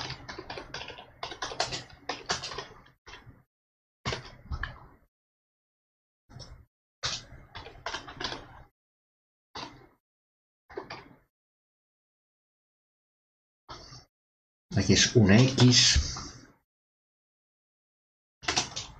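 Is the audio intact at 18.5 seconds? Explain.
Yes, the audio at 18.5 seconds is intact, with no audible fault at that moment.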